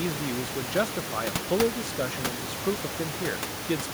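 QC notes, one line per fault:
No system faults found; the room noise sits about 8 dB below the speech and belongs to the recording.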